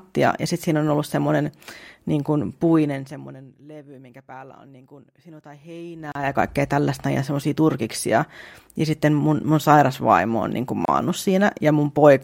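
From 2.6 to 3.6 s the speech fades down by about 25 dB, and a fine ticking rides on it the whole way, a zipper noise from the level being lowered in 1 dB jumps, roughly thirty times a second, with no smoothing between them. Each jump puts a tiny step in the waveform, and the run of them is heard as the zip. The same fault returns from 5.96 to 6.43 s as the level climbs back by about 25 dB, this time in coarser 2 dB steps, so the ticks come at about the same rate but each is a little stronger.

At 6.12 s, in the middle of that rise, the speech drops out for about 34 ms, and at 10.85 s it drops out again for 29 ms. Each time it resumes where it stopped. These are gaps at a join of encoded pieces. Separately encoded segments were spliced without trimming, so each join keeps the encoder's leading delay and the padded last frame, leaving a short silence with slightly smeared edges.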